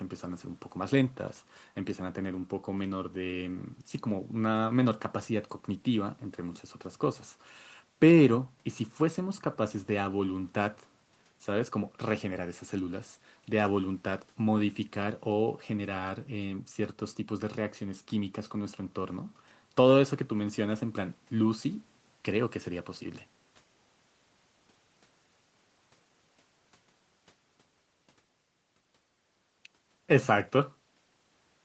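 Nothing stood out on listening to the speech, which shows only the ordinary traits of a call path, with no content above about 8 kHz.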